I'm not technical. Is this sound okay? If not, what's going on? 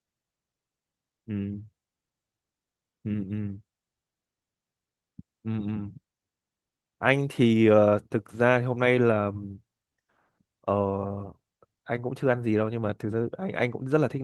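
Yes, no faults here.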